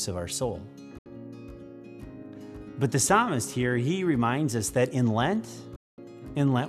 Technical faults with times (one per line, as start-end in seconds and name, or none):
0.98-1.06 digital broadcast dropout
5.76-5.98 digital broadcast dropout